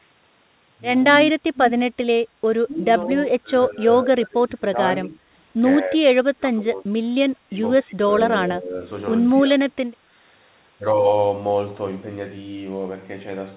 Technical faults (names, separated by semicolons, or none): speech suppressed in double talk